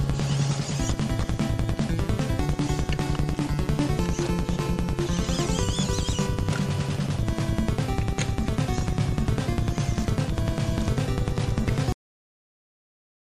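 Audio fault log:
11.92–13.31 s, cut-off end: the sound stops mid-event and drops straight to digital silence with no decay, since the final buffers never got written out.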